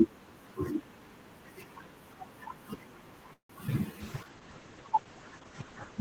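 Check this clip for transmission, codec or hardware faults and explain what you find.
Four faults fall close together in the second half of this speech clip, all of the kind a congested call path produces.

From 3.33 to 3.51 s there is a call audio freeze. Incoming packets likely stalled and the jitter buffer ran dry, so the receiver stretched the last sound into a fading buzz or hiss that drops to silence for about 120 ms. Speech resumes where it left off, so nothing is lost, but 159 ms of delay is added.

At 3.67 s playback skips ahead. Roughly 70 ms of speech is dropped and the two sides are butted together with only a tiny fill, giving an abrupt jump. This trims some of the delay the freeze had built up.

Between 3.92 and 4.30 s a jitter buffer slow-down follows. The receiver repeats single pitch periods to rebuild its reserve, adding 58 ms and running the audio at 87% speed. Sounds are drawn out at unchanged pitch.

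From 4.01 s to the end there is a call bitrate drop. The encoder falls from 32 to 10 kbps and the audio bandwidth narrows from 20 kHz to 8 kHz. The speech turns coarse and muffled, losing its top-end detail, and does not recover before the clip ends.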